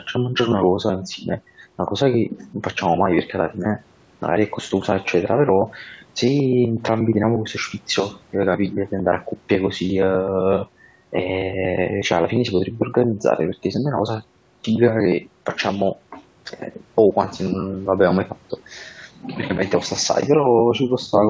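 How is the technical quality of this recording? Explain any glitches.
The technical quality of this recording is sound, with no glitches to explain.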